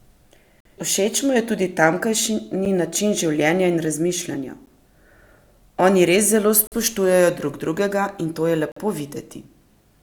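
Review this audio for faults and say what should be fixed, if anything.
The stream has gaps between segments: the timestamps of consecutive chunks, spaced every 2.0 s, don't meet, and the player fills each shortfall with silence. The result is a hard-edged hole in the speech at 0.60–0.65 s (about 49 ms), 2.65 s (8 ms), 4.66 s (11 ms), 6.67–6.72 s (about 48 ms) and 8.72–8.77 s (about 46 ms). The regular two-second spacing identifies segment boundaries, and nothing is lost, only delayed. To fix it, make each segment's start timestamp exactly match the previous segment's end when packaging, or have the player close small timestamp discontinuities instead of padding them with silence.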